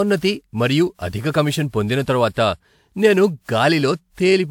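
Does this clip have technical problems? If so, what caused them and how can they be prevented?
Yes: throughout, the speech sounds swirly, hollow and smeared, with blurred attacks. This is likely generation loss, from re-encoding about seven times with a lossy codec consistent with 128 kbit/s WMA. Prevent it by keeping a lossless master and encoding to lossy only once.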